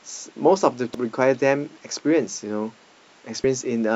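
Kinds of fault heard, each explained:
Damaged data in a compressed stream: brief glitches at 0.94–0.98 s and 3.44–3.47 s, where corrupted bytes made the decoder misread frames and lose sync.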